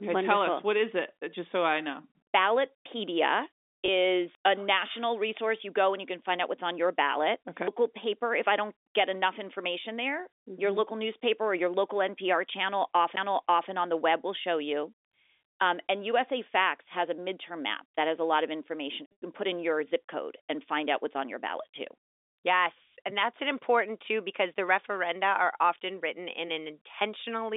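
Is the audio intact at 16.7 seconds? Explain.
Yes, the speech at 16.7 seconds is intact, with nothing wrong beyond the usual narrow band of G.711 telephone coding.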